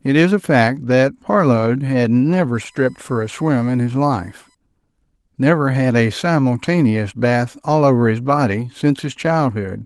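From 2.55 s to 4.55 s there's a USB whine under the speech: a steady, fixed-pitch tone on a 1 kHz fundamental, with its strongest component up at 8 kHz. That's the bus pulling current in 1 ms frames and 125-microsecond microframes, and it's leaking into the audio through the power or ground. It sits roughly 40 dB below the speech, so it's faint, a thin high whistle, with light Opus coding on top.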